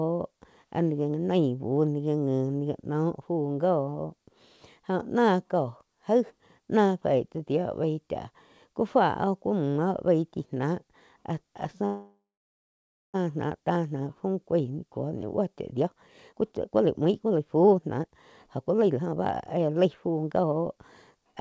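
Packet delivery likely stalled and the jitter buffer ran dry from 11.85 to 13.16 s, a call audio freeze. The last sound is stretched into a fading buzz that falls silent for about 0.93 s, then the speech resumes where it stopped, pushed 1.28 s later.

Right after "ni buo chá", from 15.73 to 21.33 s, the receiver's jitter buffer speed-up trims its backlog by cutting out short pitch-period slices over and over. The speech runs at 120% speed with pitch unchanged, sounding hurried as about a second is squeezed out. Through all this, the G.722 path carries nothing above 8 kHz.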